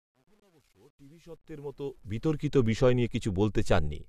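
A short speech clip with two problems, both near the start. The fade-in that runs up to about 2.46 s has truncation distortion underneath it: the volume stage is holding too few bits with no dither, so at low level the waveform collapses into a handful of coarse steps. It's roughest from the very start to about 1.73 s, where the quiet audio turns gritty. The grain fits something like a 10-bit path. On top of that there's a gap between stream segments at 0.40 to 0.42 s: a hard-edged hole of about 24 ms where the player padded a timestamp mismatch with silence. Nothing's actually missing, just pushed later. Only one shows up here, which fits segments longer than the clip itself, maybe around 6 s each.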